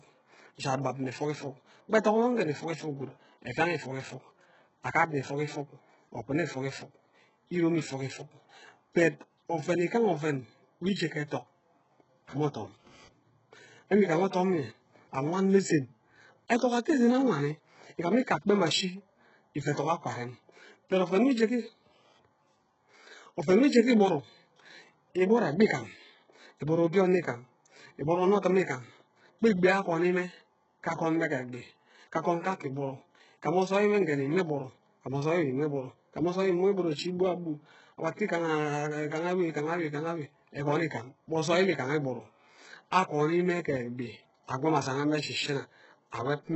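Throughout the speech, the treble sounds synthetic, gritty and metallic, with s sounds lisping and nothing above 8 kHz. This is likely HE-AAC compression, with the heavy damage pointing to a very low bitrate near 8 kbps. Spectral band replication copies lower bands upward, so the top end stays present but mismatched, unlike a plain low-pass cut that simply removes the treble.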